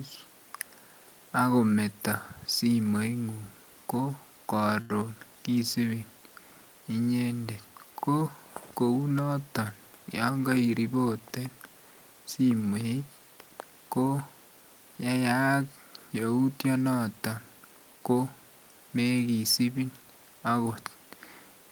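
Speech, with one short stall from a late packet at about 4.81 to 4.93 s. A packet arrived late, the jitter buffer ran dry, and the receiver held the last sound for roughly 86 ms before picking up where it left off. Nothing's lost, but everything after runs 86 ms later.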